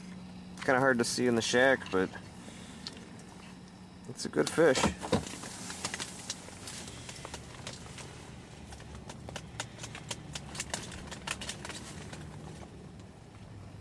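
Throughout the clip, the resampler restarted on every block: each 10 ms block was converted from 48 kHz to 24 kHz in isolation, so every block edge carries a small error. These repeat at 100 Hz, heard as a buzz that appears only while signal is present.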